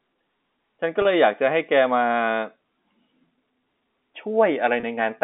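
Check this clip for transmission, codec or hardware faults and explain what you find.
Two brief packet losses with pitch repetition occur, at 1.02 s and 4.80 s, on telephone-band audio carried by G.711 A-law at 64 kbps, which limits the sound to roughly 200 to 3600 Hz.

Packet loss with pitch repetition: each gap lasts about 30 ms, which points to a single lost packet. The receiver filled the hole by repeating the last pitch period, so instead of a dropout the sound briefly holds and buzzes. That held, tonal quality distinguishes it from a plain silent gap or a click.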